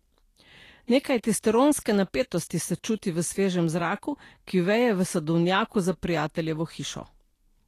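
From start to finish the speech has a grainy, hissy treble, roughened tones and softened attacks, with nothing above 14.2 kHz. This is likely Vorbis compression at a low rate, fitting roughly 37 kbps. Fine treble detail turns into noise of similar energy rather than the metallic swirling of MP3.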